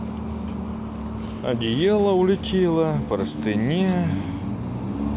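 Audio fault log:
No faults are heard in this speech clip. The A-law G.711 telephone coding stops the sound at 4 kHz, consistent with 8 kHz sampling, and leaves a faint hiss about 38 dB under the speech that rises and falls with its level.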